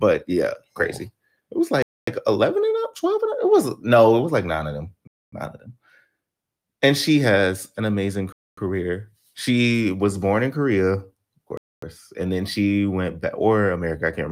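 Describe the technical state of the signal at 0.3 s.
At 0.3 s the signal is intact, with no dropout, click, distortion or other fault audible at that point.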